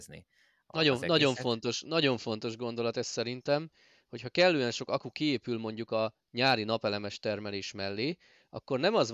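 No technical faults are audible.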